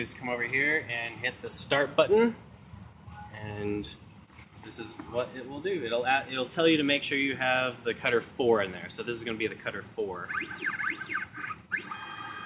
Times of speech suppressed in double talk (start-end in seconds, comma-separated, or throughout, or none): none